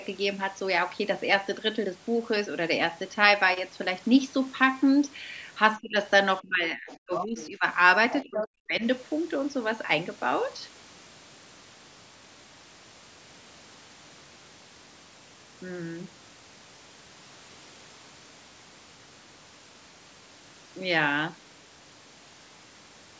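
From 5.78 to 5.96 s and again from 6.41 to 7.65 s, the speech dips by up to roughly 20 to 25 dB. This is speech suppressed in double talk, likely an echo canceller ducking the talker while the far end also speaks. Inside that stretch, brief scraps of the other side's voice leaking through appear at 6.89–6.94, 7.15–7.24 and 7.40–7.47 s, faint to moderate. That residual echo was likely missed by the canceller, and it is a second voice rather than a distortion of the talker. From 8.11 to 8.48 s the leak grows to nearly the talker's level. It overlaps a deeper suppression from 8.23 to 8.82 s, where the speech drops by roughly 40 dB.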